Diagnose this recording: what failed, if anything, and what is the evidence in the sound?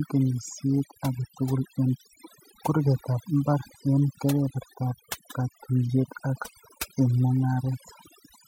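Overdone noise removal in the processing stage, throughout. Bands near the noise estimate are cut hard. The background becomes twinkling near-silence. Quiet parts of the voice are cut along with it.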